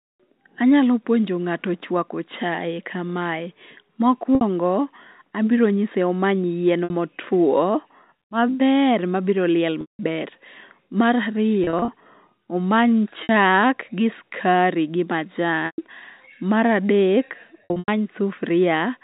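Packet loss with pitch repetition interrupts the telephone-band sound at 4.35, 6.84, 9.81 (after "maber mabiroliel"), 11.64, 13.23, 15.66 and 17.64 s. Each gap of 60 to 180 ms is bridged by looping the last pitch period, which produces a held, buzzy tone on the shorter gaps, while the longer ones fade into silence before speech returns with a short cross-fade. On a spectrogram the harmonics look frozen and flat, and on the waveform identical cycles taper away before the sound resumes.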